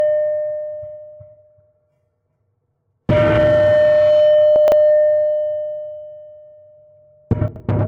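A brief jumbled stretch at 4.56 to 4.72 s, and again at 7.48 to 7.6 s, is chunks out of order: a 40 ms chunk played three chunks late, then two late, so nothing is lost but the sequence is scrambled across three hard joins.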